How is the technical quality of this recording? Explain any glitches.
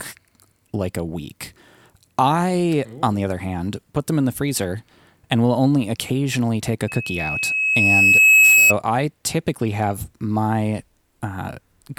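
The recording is marred by a loudspeaker feedback squeal partway through the speech. It starts at 6.88 s, right after "only occasionally take a", and lasts until 8.74 s, ending before "I typically have my". A single tone at 2.6 kHz swells over about a second and a half until it sits roughly 10 dB above the speech. The microphone was picking up a loudspeaker carrying its own signal. At 2.6 kHz the loop gain passed one, so that tone fed itself and kept growing.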